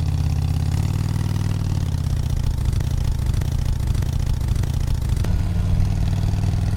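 A short sound recording with a broken-record loop from 2.81 to 5.25 s: a 0.61 s fragment repeats four times, showing as identical, evenly spaced blocks on a spectrogram. This is likely a stalled player or stream.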